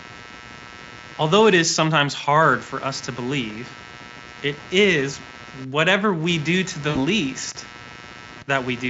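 Computer activity noise runs throughout: a buzzing, chirping pulse train near 100 per second, roughly 20 dB below the speech, tracking the computer's load on a shared ground rather than the voice.

VoIP packet loss concealed by the speech codec strikes at 6.89 to 6.97 s, about 60 ms missing, and again at 8.39 to 8.44 s, about 20 ms. The decoder stretches the last pitch into a fading buzzy tone, with weak speech lingering just afterwards.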